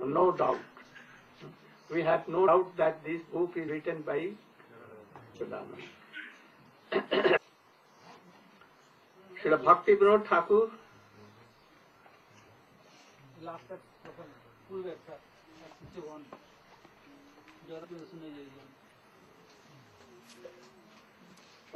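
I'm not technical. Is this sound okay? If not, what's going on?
No. The sound jumps ahead at 1.40, 2.47, 3.67, 5.40, 7.36 and 17.83 s. These are compressed frames skipped: short chunks go missing, mostly a fraction of a second, and nearly half a second at 7.36 s. The missing pieces are made of frames of roughly 26 ms each.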